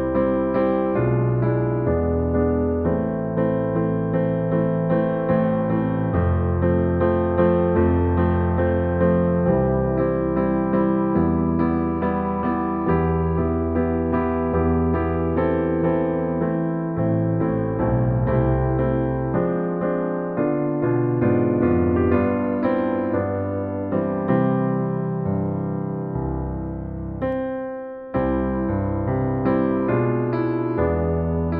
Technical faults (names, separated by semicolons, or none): pre-emphasis left on